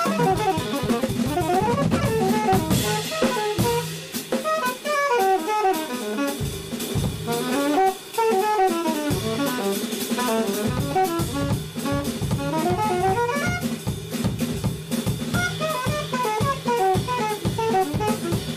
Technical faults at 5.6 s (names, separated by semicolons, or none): none